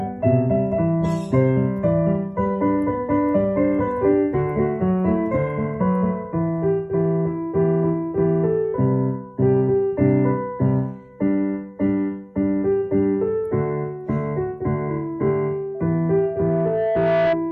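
At 15.74 s a loudspeaker feedback squeal begins and runs until 17.39 s. A microphone is picking up the loudspeaker it drives, and at around 661 Hz the loop gain has passed unity, so that frequency reinforces itself on every trip around the loop. It is heard as a steady pure tone that swells over roughly a second and a half, ending up a few decibels louder than the surrounding sound before it cuts off.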